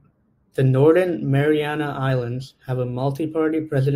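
No technical faults can be heard anywhere in this speech recording. Nothing in the audio stands out as needing a timestamp or a closer look.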